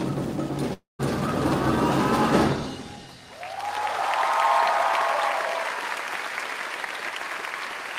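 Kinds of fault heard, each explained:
Long network dropout: at 0.73 s the audio likely stopped arriving and the receiver stretched the last sound into a fading buzz, leaving about 160 ms of silence before it resumes at 1.01 s, about 260 ms lost. The waveform shows a decaying smear, then a flat gap; the spectrogram shows blurred, dimming bands, then emptiness.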